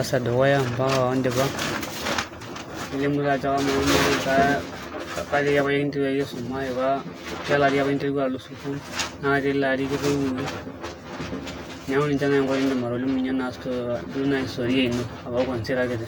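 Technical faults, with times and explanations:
2.86–16.08 s, channel delay (comb filtering): the speech turns hollow and phasey, with a fixed notched colour. One channel runs around 10 ms behind the other, and summing them to mono cancels shared content at evenly spaced frequencies, starting near 40 Hz.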